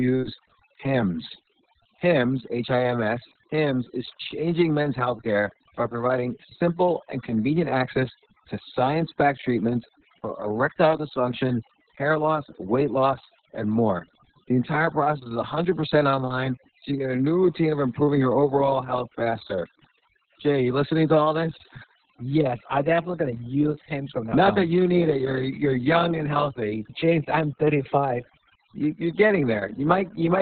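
Throughout the speech, overdone noise removal has pushed individual frequency bands down or off wherever they sat near the noise estimate. The background drops and breaks up into twinkling specks, and quiet parts of the voice vanish too. Unlike a simple gate, it works band by band rather than muting everything together.

Also throughout is heavy Opus voice compression in its SILK mode. Nothing sounds above about 4.4 kHz, a narrowband picture that fits a bitrate near 6 kbps, and coarse excitation coding makes the voice muffled, hoarse and slightly robotic. This differs from a plain low-pass, which dulls the sound without that grainy roughness.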